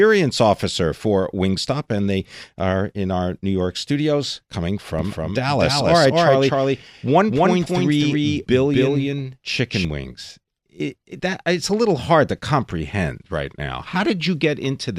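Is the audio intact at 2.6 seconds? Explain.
Yes, the speech at 2.6 seconds plays through intact, with no fault at that moment.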